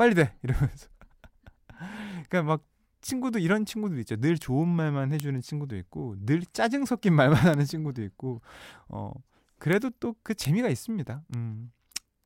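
A speech recording carrying six bit error spikes, heard as isolated sharp ticks at 4.42, 5.2, 7.54, 9.73, 10.45 and 11.34 s. Each is broadband and bears no relation to the speech around it. The ticks reach about -12 dBFS at 4.42, 7.54 and 9.73 s, and about -6 dBFS at 5.2 and 10.45 s. The softer one at 11.34 s, about -24 dBFS, spans three consecutive samples. Flipped bits in memory or on a digital link fit this pattern.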